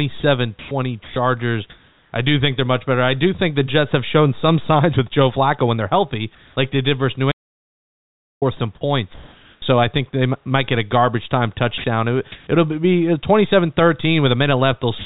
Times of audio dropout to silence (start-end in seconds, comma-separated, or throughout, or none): 7.32-8.42